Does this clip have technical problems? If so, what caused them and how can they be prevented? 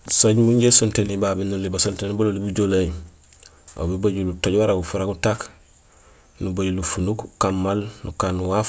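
No, no technical faults here.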